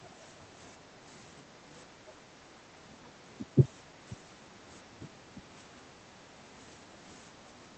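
At 0.82 to 0.93 s the room sound behind the speech dips by about 10 dB. This is background gated by the echo canceller. While the far end plays through the loudspeaker, the canceller pulls the microphone down hard. The room tone thins out, then returns when the canceller releases. It happens again from 2.19 to 2.8 s, the longest dip at half a second. It recurs from 3.04 to 3.21 s and from 3.91 to 3.97 s, each about 11 dB down.

At 3.55 to 3.63 s the talker's voice sinks by roughly 15 dB for a brief moment. At 5.36 to 5.4 s there is a shorter dip of roughly 10 dB. This sounds like speech suppressed in double talk. The likely cause is both sides talking at once. The canceller cannot tell the near talker from the loudspeaker echo, so it turns both down. The voice briefly loses level and then recovers.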